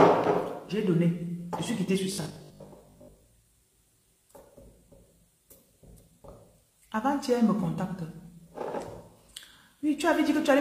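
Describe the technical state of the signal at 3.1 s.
At 3.1 s the audio has robotic sound from repeated short buffers, lasting from 2.12 to 3.26 s. A rigid metallic buzz at 50 Hz follows the natural tone only roughly. The likely cause is a 20 ms buffer replayed while new audio arrives late, so roughly half the sound is repeats.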